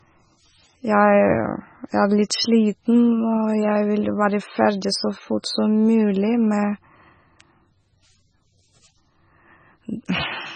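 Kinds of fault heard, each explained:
MP3 compression: throughout, nothing above 9 kHz and a heavy watery swirl on the speech, likely MP3 coding starved of bits, fitting a bitrate near 16 kbps.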